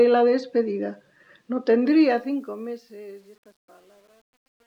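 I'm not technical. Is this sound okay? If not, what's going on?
No. From 1.87 s the fade-out suffers truncation distortion on a fade: the volume stage keeps too few fine steps, which fits roughly 9 bits, so the tail turns gritty, worst between 2.67 s and the end.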